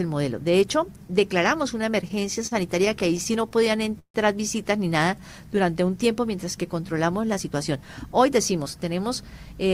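From 1.81 to 4.16 s, repeated stalls cause stutter. The jitter buffer kept running dry, so the last sound was stretched about two dozen times, up to 152 ms each.

From 7.24 to 8.83 s, a jitter buffer speed-up trims about 150 ms of excess buffered audio. The sound runs 10% fast at unchanged pitch, hurried.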